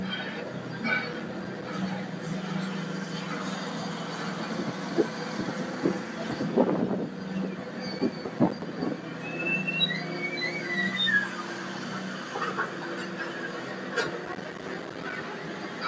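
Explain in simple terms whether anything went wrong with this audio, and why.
Two things went wrong. The first is a noise suppressor applied to music or sounds, and it runs through the whole clip. A noise-removal tool built for voices treats steady tones, room ambience and reverb tails as unwanted noise and turns them down. Sharp attacks get through, but anything held sinks a moment later, so the audio keeps pumping and thinning. Unlike a compressor, it isn't reacting to loudness. It reacts to how steady the sound is.

The second is processor overload crackle, in three bursts: 1.09 to 1.65 s, 7.96 to 8.62 s, and 14.26 to 15.22 s. The computer couldn't finish its tiny chunks of audio on time, and each missed chunk became a sliver of silence. The gaps sound like they fit chunks of roughly five milliseconds, with around fifteen missed in each of the first two bursts and about fifty in the last. 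They run together into a gritty tearing that stops when the load eases. A single dropout would be one clean gap. Here many tiny ones cluster into crackle.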